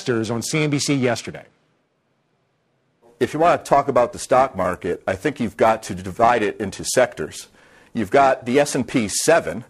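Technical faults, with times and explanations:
Throughout: periodic clock jitter. The converter's sample clock is being shaken by interference at a steady rate of around 1 kHz. Each part of the speech picks up copies sitting about that distance above and below it. Higher-pitched content is hit hardest, so the brighter parts of the speech gain a rough, metallic fringe. The edge rides on the speech itself and disappears in the pauses, because silence has nothing to smear.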